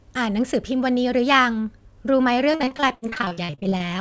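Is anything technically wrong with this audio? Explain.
Yes. From 2.52 s to 3.82 s the speech breaks up with repeated packet loss, giving a robotic sound. Roughly two dozen short dropouts, the longest about 62 ms, come in quick succession. Each hole is bridged by extending the last received sound, so about 41% of that stretch is synthetic fill. It sounds choppy, with fragments missing. On a spectrogram, harmonics smear into flat, repeated blocks. The waveform shows stuttering, copy-like segments. Above 8 kHz the spectrum is empty, which fits a wideband call codec such as G.722.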